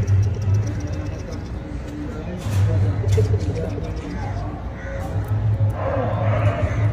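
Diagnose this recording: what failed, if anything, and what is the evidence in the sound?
Nothing in the recording points to a failure at any stage from capture to playback, and the signal stays continuous and stable throughout.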